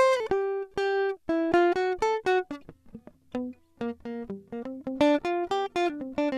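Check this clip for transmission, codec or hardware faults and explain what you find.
No faults can be heard in this music clip. Nothing in it calls for further explanation.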